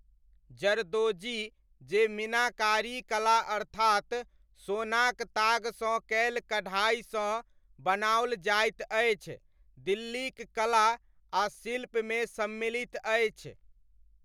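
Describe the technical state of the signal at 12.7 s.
The signal at 12.7 s is intact, with no fault audible at that moment.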